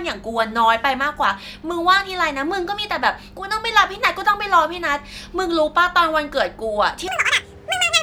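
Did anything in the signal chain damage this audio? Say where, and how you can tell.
Yes. From 7.08 to 8.02 s the speech runs at double speed and an octave higher. This is audio read two samples at a time, a sample-format conversion error.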